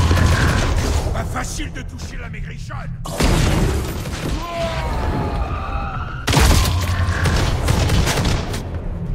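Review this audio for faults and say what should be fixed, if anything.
No faults found; nothing needs fixing.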